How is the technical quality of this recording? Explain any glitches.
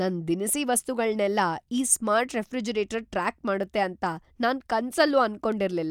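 The recording has two brief glitches, both bit error spikes, at 3.63 s, just after "ಈ ಸ್ಮಾರ್ಟ್ ರೆಫ್ರಿಜರೇಟರ್ ಟ್ರ್ಯಾಕ್", and at 5.52 s. A flipped bit in stored or transmitted data makes one sample leap by a power of two and snap straight back. The result is a single sharp, broadband tick unrelated to the speech. The first tick points to one corrupted sample and the second to a short run of about three. Unlike a dropout or an editing click, no audio goes missing and the waveform resumes exactly where it was.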